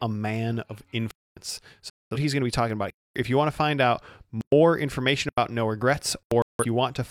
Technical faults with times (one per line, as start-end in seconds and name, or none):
1.11-1.37 block of digital silence
1.90-2.17 digital broadcast dropout
2.90-3.16 block of digital silence
4.41-4.52 block of digital silence
5.29-5.38 block of digital silence
6.23-6.31 block of digital silence
6.42-6.65 digital broadcast dropout